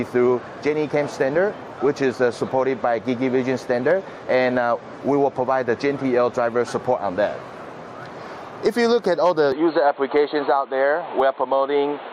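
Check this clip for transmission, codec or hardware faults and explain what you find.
Two faults are audible: gain pumping across the whole clip, and an input switched to a poorer device near the end.

Gain pumping runs throughout, with a swing of around 10 dB, likely from gain set too high with a fast limiter clamping every peak, which leaves the dynamics squashed.

From 9.52 s to the end, the input switched to a poorer device. The sound turns dull and boxy at once, with nothing above 4.3 kHz, a new noise floor roughly 30 dB down, no gap and no real level jump. A narrowband headset or secondary microphone is the likely source.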